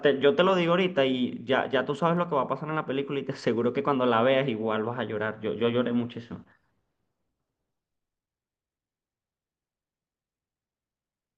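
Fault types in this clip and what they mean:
Dropped samples: at 2.17 s a single sharp click cuts through the speech. Its likely cause is a fraction of a millisecond of samples going missing, so the waveform jumps abruptly to a later value. No sound is removed, leaving only a thin vertical spectral line.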